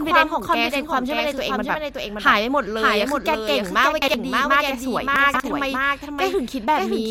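Throughout the speech a second full-band copy follows about half a second behind, at about 5 dB below the original. It is a doubled audio track, likely from a second, slower capture path or an edit holding two copies out of step. Unlike echo or reverb, it has no decay or room colour.

From 4.02 to 4.14 s, chunks out of order: a 60 ms chunk arrives one chunk late and plays after its successor, leaving a jumbled moment with three hard joins. From 5.16 to 5.40 s a 60 ms chunk plays three chunks late. Unlike a dropout or stutter, nothing is missing or repeated; only the order is wrong.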